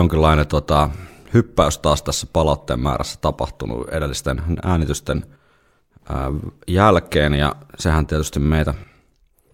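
Listening closely to this recording of speech, nothing stood out as a technical problem at any point.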